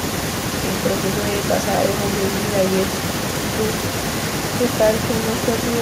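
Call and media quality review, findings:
Speech suppressed in double talk, 0.00 to 0.52 s: opening speech pulled down by around 30 dB for about half a second. Likely echo canceller suppressor unable to separate near-end talker from loudspeaker echo, attenuating both.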